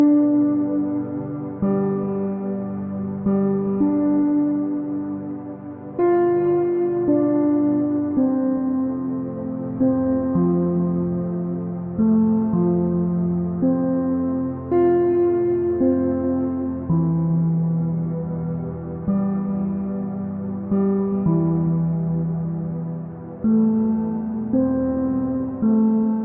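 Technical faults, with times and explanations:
Nothing here stands out as a technical problem; the audio runs along without a single snag worth flagging.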